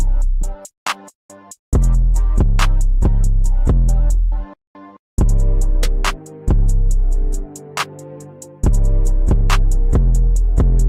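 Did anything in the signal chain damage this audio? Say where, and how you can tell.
No, nothing along the chain from capture to playback has left any audible damage on this one, so there's nothing here to trace back to a particular stage.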